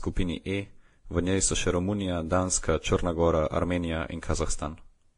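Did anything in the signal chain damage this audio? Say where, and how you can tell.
Yes. At the codec stage, the speech was likely passed through transcoding between lossy codecs, a low-rate Vorbis encode near 31 kbit/s and then WMA near 64 kbit/s. Nothing remains above 10.5 kHz, and artefacts from both codecs stack together for the whole clip.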